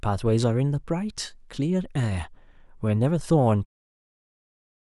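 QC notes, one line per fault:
No faults found in this speech clip; the fade-out ending at 3.66 s is a deliberate smooth edit with no click or hard edge.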